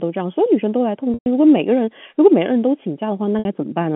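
Speech on a telephone-band G.711 line suffers packet loss with pitch repetition. At 1.14 s (120 ms) and 3.39 s (60 ms), the receiver repeats the last pitch period to bridge the gaps, producing a brief held, buzzy tone that fades before the speech resumes.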